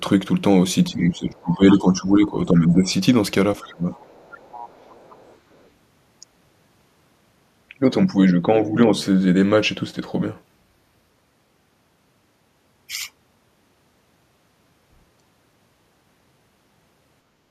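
Speech suppressed in double talk occurs from 0.9 to 2.92 s, from 3.61 to 3.87 s and from 4.79 to 4.91 s. The voice dips by roughly 15 dB, and by about 25 dB in the middle stretch. This is likely an echo canceller that could not separate the talker from loudspeaker echo while both sides spoke, so it turned both down. The other side's voice is leaking through from 1.33 to 1.54 s, very faintly at roughly 35 dB below the speech, and then at roughly 25 dB below from 3.65 to 3.73 s and from 3.95 to 5.68 s. The likely cause is residual far-end audio from the loudspeaker that the canceller failed to remove from the microphone.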